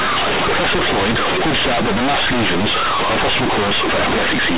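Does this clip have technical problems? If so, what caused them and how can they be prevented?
Yes. Throughout the speech, companded audio is read as linear: A-law bytes are played as plain 8-bit samples without expansion. Each sign change throws the output across about half its range, so quiet passages become as large as loud ones, and the result is harsh, buzzy distortion with loud noise in the pauses. The waveform looks like a dense block with no quiet gaps. The spectrogram shows broadband noise filling the entire band up to its 4 kHz ceiling, including pauses. To prevent this, label the stream as A-law and expand it to linear PCM before playback.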